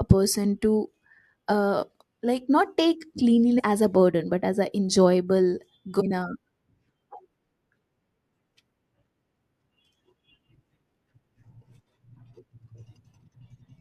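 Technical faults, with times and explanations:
3.58–3.60 s and 5.99–6.02 s: damaged data in a compressed stream. Corrupted frames throw the decoder out of sync, giving a brief glitch before "as a burden but" and after "but as an enjoyable".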